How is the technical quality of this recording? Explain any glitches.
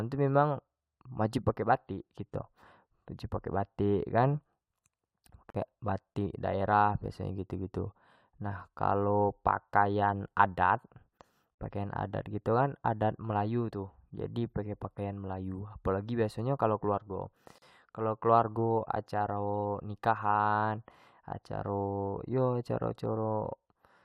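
The speech is broken by three short dropouts. A gap at a join of encoded pieces occurs at 5.50–5.55 s (44 ms), 11.55–11.58 s (37 ms) and 17.58–17.62 s (37 ms), recurring every 6.0 s. The audio was likely encoded as 6-second segments and spliced untrimmed, so each segment's leading encoder delay and padded final frame remain. The result is a brief, abrupt hole, edges smeared, before the speech resumes where it stopped.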